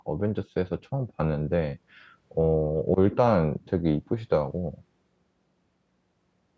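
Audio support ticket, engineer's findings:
No faults found in the speech recording; call microphone processing is working as designed, with nothing above 8 kHz and the lowest bass removed by its high-pass filter.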